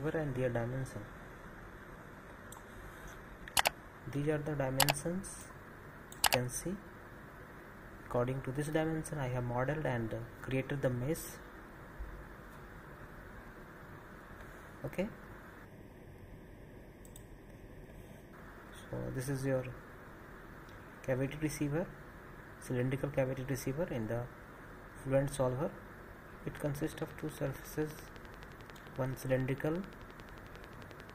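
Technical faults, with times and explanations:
0.0 to 4.0 s, adaptive stream starting at a low bitrate: The opening seconds sound thin and smeared, with the top end missing or replaced by a synthetic sheen and stronger codec artefacts. This points to a low-bitrate profile such as HE-AAC at about 20 kbit/s, which the player picks to start quickly. Once it had gauged the connection it switched to a better stream, consistent with AAC-LC near 96 kbit/s, so at 4.0 s the quality jumps up abruptly with no gap.
15.65 to 18.33 s, channel delay (comb filtering): For these few seconds the sound turns hollow and phasey. One channel arrives a fraction of a millisecond behind the other, under half a millisecond. When the two are summed to mono, whatever they share cancels at evenly spaced frequencies. The first notch falls around 1.5 kHz, with further notches repeating above it. That fixed pattern of gaps in the spectrum is what gives the hollow, comb-filtered colour until the alignment returns.
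26.57 to 31.11 s, train of clicks: A regular ticking runs over the end of the clip, about 11.3 clicks per second and around fifty in total. The clicks are much alike in shape and peak at about 10 dB above the sound, so they stay audible in quieter moments too. Such an evenly paced train of near-identical pulses likely comes from electrical interference from nearby equipment or a faulty connection or power supply injecting the same spike repeatedly.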